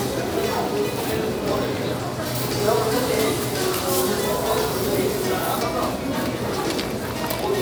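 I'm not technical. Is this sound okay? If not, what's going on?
No, not quite. From about 2.35 to 5.63 seconds there's a problem called pre-emphasis left on. Some systems deliberately boost the treble before storing the sound and expect playback to turn it back down. Here that second step never happened for that stretch, so the top end stays pumped up. You'll hear it as thinner, brighter and more hissy or sharp than the parts before and after, which fits the emphasis used on some CDs.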